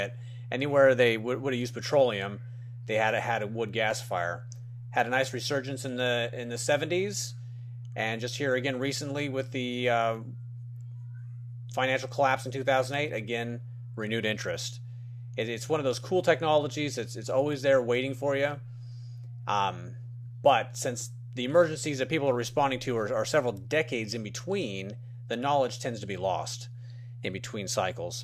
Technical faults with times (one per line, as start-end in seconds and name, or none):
3.91 dropped samples